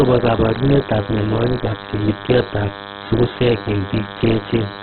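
Throughout the speech, a DECT cordless phone buzz sits about 10 dB below the voice: radio bursts every 10 ms are rectified into a thin, steady 100 Hz buzz, seen as evenly spaced harmonic lines on a spectrogram. Also throughout, the speech sounds rough, grainy and band-limited, with nothing above 4.2 kHz. This is likely heavy Opus compression in CELT mode, at a rate that fits about 8 kbps. The spectrogram shows a hard ceiling with noisy, smeared fill below it.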